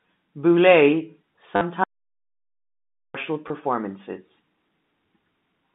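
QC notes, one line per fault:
1.56–1.61 s and 3.48–3.50 s, packet loss with last packet repeated: about 50 ms, then 20 ms, filled by replaying the last packet, which fits 10 ms packets. Joins land off the pitch cycle, giving a brief 100 Hz robotic buzz. On the spectrogram there are copied blocks. The waveform shows identical repeating segments.
1.84–3.15 s, audio dropout to silence: the sound cuts off abruptly for about 1.3 s and returns mid-flow, most likely from a dropped input link or device. The gap is silent with no room tone. The waveform is a flat line, and the spectrogram is blank.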